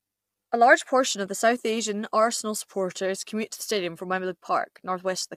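A speech recording with low-delay AAC compression throughout: the voice sounds rough and grainy, with noise filling between pitch harmonics. Short codec frames resolving harmonics poorly, likely from AAC-ELD, explain this, and the damage fits a bitrate around 32 kbps.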